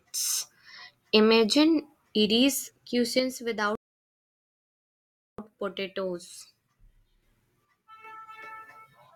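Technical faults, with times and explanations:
3.19 to 7.22 s and 7.65 to 8.04 s, one channel drops out: the speech level falls abruptly by about 6 dB at each onset and jumps back up at each end. This is likely a lost stereo channel, so after summing to mono only half of what both sides shared remains. On a waveform the envelope narrows in two sharp steps. A spectrogram shows every band darkening together, with no spectral change.
3.75 to 5.38 s, rebuffering stall: inside the first dropout the sound cuts to dead silence for about 1.63 s, then resumes exactly where it left off. This happens when the player runs out of downloaded audio and waits for more. Nothing is skipped, but that time is added to the clip. The waveform shows a flat line with hard edges on both sides, and the spectrogram shows a blank vertical band with no noise floor.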